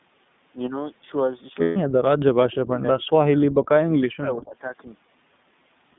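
Throughout, the speech sounds thin, slightly rough and synthetic, with nothing below 150 Hz or above 3.6 kHz. That is the iLBC codec, and the damage fits its 15.2 kbps mode with 20 ms frames.

From 1.62 to 1.77 s, about 140 ms, the sound is held as a buzzy, breathy vowel. These are lost iLBC frames: the decoder repeated the last pitch cycle with noise, and the speech recovers immediately afterwards.

Between 2.03 and 3.7 s, the speech dips and cuts out in pieces for about a second in total, at worst by around 40 dB. From 3.9 to 4.73 s it dips again for roughly half a second, by around 20 dB. This is likely speech suppressed in double talk, where an echo canceller turned the talker down while the other side was speaking.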